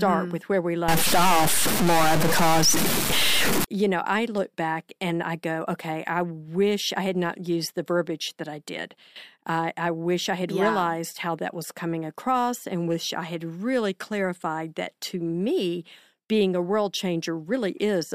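From 0.88 to 3.64 s, between "with where we" and "you know I look", the speech turns harsh and buzzy, and the short gaps between phrases fill with a gritty noise. This is a stuck bit, likely one sample bit held at a fixed value. It is a fairly high bit, with a weight of roughly -15 dBFS, so about half the samples jump by that amount. On a waveform, the trace shows abrupt square offset steps. A spectrogram shows broadband smearing right up the frequency range, even through the pauses.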